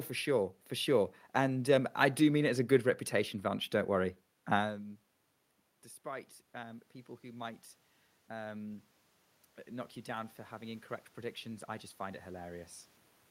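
A speech clip with automatic gain rising from 9.64 to 12.74 s. The gain climbs about 5 dB gradually, lifting the voice and room noise together.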